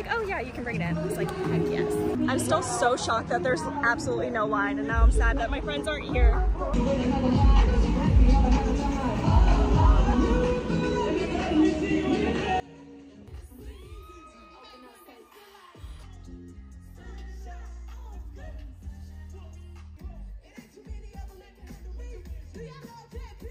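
From 12.6 s to the end, the sound collapses to a faint remnant, roughly 22 dB quieter, with its centred, shared content nearly gone. This is one channel inverted: likely one stereo channel's polarity is reversed, so material common to both cancels when summed to mono.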